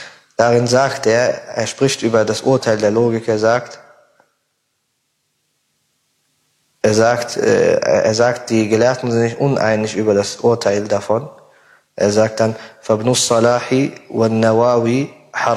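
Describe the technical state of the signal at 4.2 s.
At 4.2 s the signal is intact, with no audible fault at that moment.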